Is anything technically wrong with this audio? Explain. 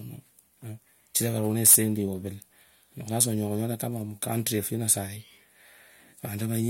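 Yes. The speech has two bursts of hard clipping, from 1.66 to 1.76 s and from 4.89 to 4.92 s. The signal overran what a stage could pass, by about 15 dB and then about 7 dB, so its peaks were sheared flat. Those flat tops generate high harmonics, heard as harsh fuzz on the first burst and a shorter crackle on the second. Unlike soft saturation, the distortion starts abruptly and sounds gritty rather than warm.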